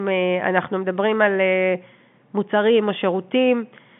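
No technical faults can be heard in this speech.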